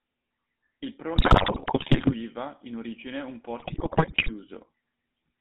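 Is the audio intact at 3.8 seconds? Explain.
No. From 3.60 to 4.31 s, just after "in origine un", GSM bit errors corrupt the decoder's filter, pitch and gain values frame by frame, so the speech breaks into squawks, pops and gargling. On a waveform, level jumps suddenly on single frames. A spectrogram shows smeared, misplaced formant bands. Underneath, the GSM full-rate codec runs throughout, giving a buzzy, gravelly roughness from its pulse-driven excitation. The band is held to about 200 Hz to 3.7 kHz, so the spectrogram is empty above that line.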